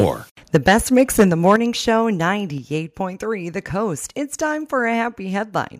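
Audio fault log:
0.00–0.06 s, 0.54–1.56 s, 1.87–1.89 s, microphone overload: input gain likely set too high, driving peaks about 2, 8 and 1 dB past the converter's ceiling; flattened tops, a few percent of samples, give harsh crackle.
0.56 s, 1.56 s, 2.58 s, microphone volume stepped down: the software likely cut the input level in single steps, about 4, 7 and 3 dB, so speech and background abruptly drop in loudness.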